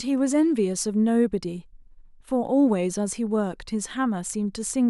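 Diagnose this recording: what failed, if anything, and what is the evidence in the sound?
Nothing failed in this recording, and the sound shows no evidence of a fault at any stage.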